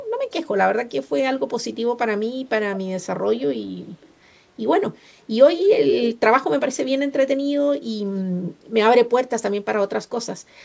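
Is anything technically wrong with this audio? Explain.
Yes. Echo leak at 4.01 to 4.14 s and 5.88 to 6.15 s: a copy of the speech returns about 0.21 s late, likely from a loudspeaker echo canceller missing it, first faint, then nearly as loud as the speech.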